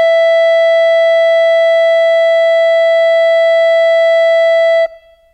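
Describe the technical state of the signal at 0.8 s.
At 0.8 s the music plays through cleanly, with no dropout, click, distortion or other fault in the signal at that moment.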